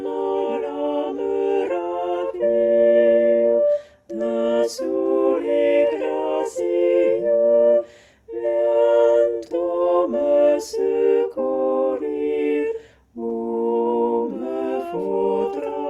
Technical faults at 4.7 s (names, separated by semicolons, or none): none